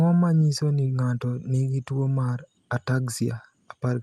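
Nothing here sounds off: it's a short bit of speech that came through an Opus call path, with the top end rolled off around 12 kHz as you'd expect from that codec, and no technical fault turns up anywhere along the way.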